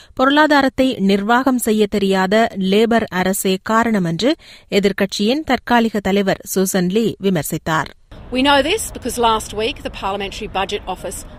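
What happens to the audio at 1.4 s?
At 1.43 s a compressed frame is skipped: about one 10 ms frame never reaches playback, so the audio jumps ahead by roughly that much. The jump leaves a brief discontinuity at the join rather than a silent gap.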